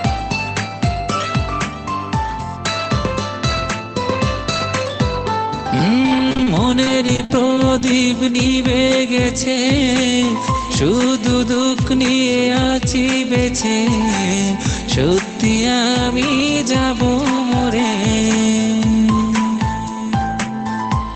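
Repeated packet loss (robotic sound) runs from 6.07 to 7.87 s. Over this stretch, packets arrive missing or too late again and again, each hole lasting up to 52 ms. The decoder patches every hole by stretching the last good sound forward, rebuilding about a fifth of a second in total. The holes follow one another so closely that the audio turns choppy, with pieces dropping out. The top end stops near 8 kHz, as a call codec would leave it.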